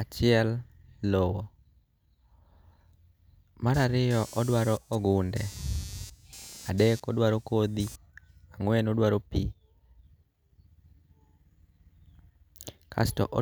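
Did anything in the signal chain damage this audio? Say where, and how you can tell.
Yes, in the analogue wiring. From 3.74 to 7.96 s the speech picks up a buzzing, chirping texture pulsing at around 200 times per second, roughly 20 dB below the speech. This is computer activity noise: processor or graphics load changes pull current through a ground shared with the audio circuit, and that ripple rides into the signal. Unlike mains hum, it doesn't hold a steady 50 or 60 Hz tone for the whole clip. It starts and stops independently of the speech.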